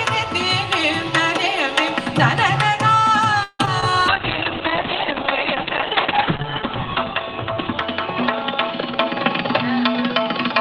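At 3.43 to 3.61 s the sound stretches into a fading buzz that ends in about 30 ms of silence, then resumes without loss. This is a call audio freeze, likely from delayed packets emptying the jitter buffer. On a spectrogram it appears as a smeared, fading band, and the waveform shows a decaying tail.

Short concealed packet loss follows at 3.65 to 3.69 s and again at 3.81 to 3.84 s. Briefly synthesized fill covers each dropout, heard as a quick smear or wobble.

From 4.1 s to the end, a call bitrate drop makes the sound rough and muffled. The spectrogram shows the top band cut from 20 kHz to 4 kHz, which fits a fall from about 32 to 6 kbps that holds at its lowest for about 2.4 s.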